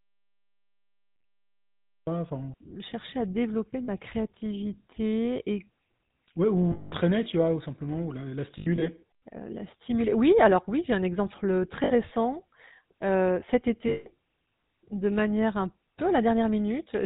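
The speech clip is already silent when it begins, and stays that way until 2.07 s. This audio dropout to silence shows as a flat waveform and an empty spectrogram with no room tone, most likely because the input was lost while the recorder kept writing silence.

Throughout, the GSM full-rate codec, at 13 kbps, gives the voice a plainly audible buzzy, gravelly roughness. The spectrogram shows a hard ceiling at 4 kHz, with nothing above it.

Lost GSM frames appear at 1.14–1.24 s, 3.84–3.89 s (between "à développer" and "créativité et"), 6.72–6.93 s (just before "tu vois ou simplement"), 8.58–8.89 s (scattered, after "vois ou simplement la"), 11.84–11.92 s and 13.88–14.14 s. Each one after the dropout is heard as a metallic, held ring. On a spectrogram it appears as a frozen, repeated pattern.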